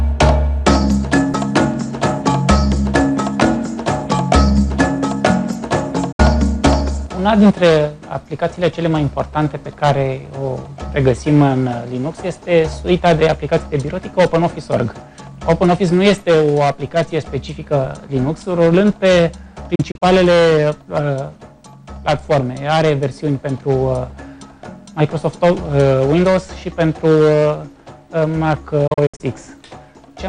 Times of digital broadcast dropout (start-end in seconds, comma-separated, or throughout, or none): 6.12-6.20, 19.75-20.02, 28.87-29.21